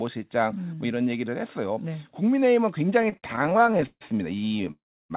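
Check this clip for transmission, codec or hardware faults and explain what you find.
Two network faults appear near the end, heard through a narrow call band with nothing above 4 kHz, which fits a G.711 mu-law path.

Repeated stalls (stutter), 3.02 to 4.71 s: packets kept arriving slower than playback, draining the jitter buffer 28 times. Each gap, up to 147 ms, was filled by stretching the last sound, about 0.49 s in total, nearly a third of the span. The audio drags and judders, but unlike a freeze it keeps moving between hiccups.

Call audio freeze, 4.71 to 5.12 s: the sound holds on a fading continuation, then drops to silence for about 0.31 s before resuming where it left off. The likely cause is a single delay jump of about 0.39 s emptying the buffer. One long stop, rather than many brief catches, separates it from the stutter.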